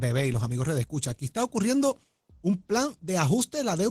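Speech carries plainly audible Opus voice compression throughout, sounding hoarse and slightly robotic from coarsely coded excitation, which fits a rate around 16 kbps. A spectrogram would show blurred, grainy harmonics below 8 kHz and thin, patchy energy above it.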